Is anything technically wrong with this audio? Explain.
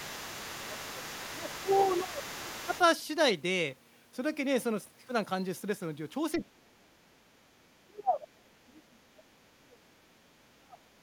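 Yes, two echo-related problems. From 0 to 2.86 s a second talker leaks in underneath, around 15 dB down, with the other side's voice leaking through, likely from a loudspeaker the echo canceller didn't fully cancel.

Speech is suppressed in double talk at 0.68–1.15, 1.33–1.7, 2.03–2.5, 2.66–2.73, 6.37–7.31 and 7.84–10.92 s, likely because the canceller ducked everything. The early dips are modest, and the last two sink deep, roughly 30 dB or more.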